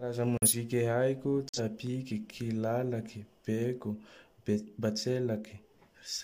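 At 0.38 s and again at 1.49 s the speech drops into sudden silence for about a tenth of a second each time, which is corrupt frame muted. A damaged compressed frame got rejected by the decoder, and the player filled that single frame's slot with silence, so timing carries on unchanged.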